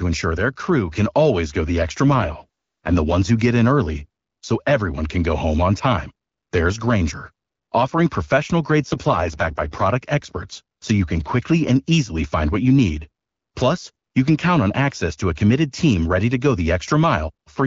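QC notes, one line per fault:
2.04–3.14 s and 8.82–9.86 s, AMR rate drop: after "always go the extra" and "offering professional", the already lightly coded HD Voice turns rough and synthetic for about a second. This fits the codec falling from 12.65 to 6.6 kbit/s to fund error protection. The spectrogram keeps the full band with no gap, but harmonics smear into grainy noise. The waveform stays continuous. Clarity returns before "ones who get in" and "experts so you can".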